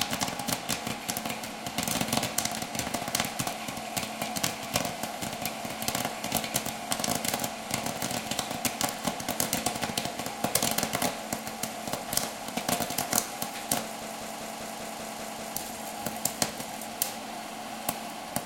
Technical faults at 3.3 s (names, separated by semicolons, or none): none